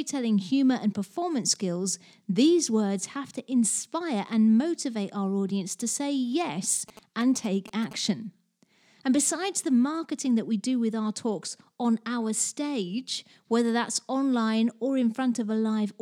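A 2G phone close to the recording chain sent a short run of signalling bursts between 6.89 and 7.93 s, and the audio circuitry rectified that radio energy into the signal. It comes through as GSM signalling bursts: a galloping dit-dit-dit of short buzzes at about 217 Hz, the GSM frame rate. It sits roughly 15 dB below the speech and lasts about a second.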